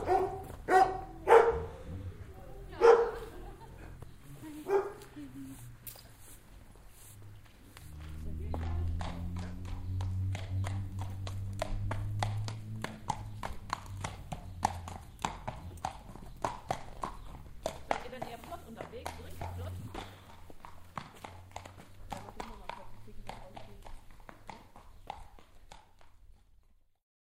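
Nothing here trips the ear as a technical fault, so there's no problem to place anywhere along the way.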